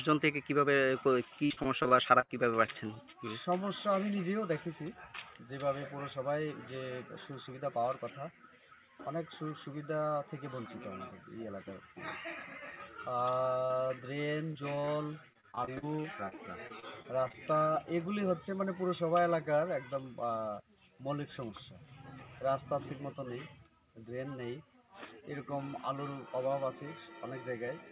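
Repeated packet loss (robotic sound) hits this call audio from 1.46 to 2.98 s and again from 13.66 to 17.35 s, where dropouts of up to 49 ms are bridged by stretching the previous sound into choppy audio with pieces missing. A jitter buffer speed-up at 7.30 to 7.73 s cuts roughly 50 ms of pitch periods, so the audio briefly runs at 109% speed without changing pitch. Throughout, nothing sounds above 4 kHz, which fits a narrowband G.711 call codec.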